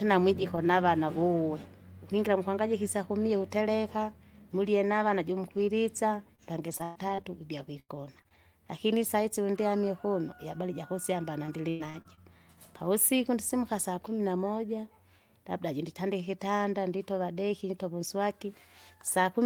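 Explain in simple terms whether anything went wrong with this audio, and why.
Repeated packet loss (robotic sound) affects the speech from 6.35 to 8.36 s and from 11.46 to 12.19 s. Lost pieces were patched by stretching earlier sound, making it choppy and robotic.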